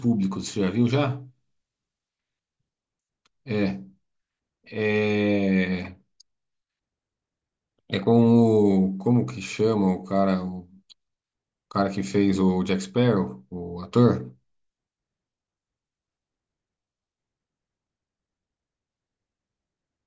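No technical faults can be heard anywhere in the recording. There is no moment in the speech where the audio breaks down or changes.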